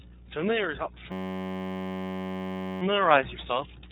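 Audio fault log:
throughout iLBC codec: Nothing above about 3.8 kHz survives, and the speech has a plainly audible rough, synthetic edge. Each 30 ms frame is coded independently, which fits iLBC's 13.33 kbps mode. That frame-by-frame excitation coding is what separates it from a plain low-pass or simple narrowband filtering.
1.12–2.82 s system hang loop: The same 10.67 ms fragment repeats exactly, about 160 times, producing a steady 93.8 Hz buzz rather than a stutter. That fits a 512-sample ring buffer cycling while the system froze. Unlike a dropout, the repeats are identical and little sound is skipped.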